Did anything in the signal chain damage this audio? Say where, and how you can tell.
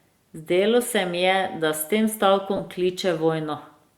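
Yes, at the Bluetooth link: lost LE Audio frames around 2.56 to 2.60 s. There's a brief noisy smear where the speech should continue, roughly 30 ms, which fits four dropped frames. The LC3 decoder refilled the gap by replaying the last spectrum with scrambled signs.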